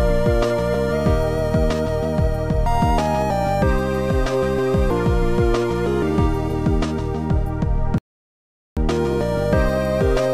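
At 7.98 s the sound cuts out abruptly in mid-flow and stays silent for about 0.79 s, returning at 8.77 s. This is a playback stall, likely caused by the player running out of buffered data or having its output thread blocked.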